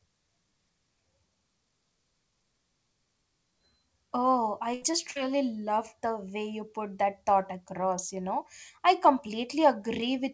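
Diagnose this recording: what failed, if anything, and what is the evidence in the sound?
Burst of packet loss at 4.74 to 4.84 s and 5.11 to 5.17 s, a network fault: the receiver extended and faded the last sound, then resumed with audio missing.

Short concealed packet loss at 4.92 to 4.95 s, also a network fault: the decoder bridged the gap by continuing the previous sound, producing a brief smear.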